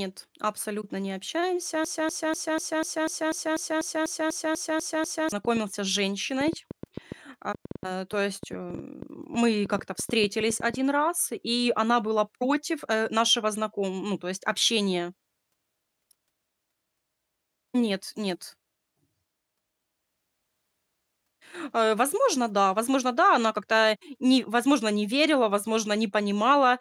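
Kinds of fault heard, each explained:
Broken-record loop: From 1.85 to 5.32 s a 246 ms fragment of the speech repeats exactly, back to back, 14 times. A stalled player or stream likely kept resending its last fragment. The speech that belonged in that stretch is lost.
Train of clicks: From 5.45 to 10.75 s, just before "раз и она была", about thirty similar clicks tick over the speech. They come at roughly 6 per second, unevenly spaced, peaking about 5 dB above the signal. Interference or a struggling interface is the likely cause.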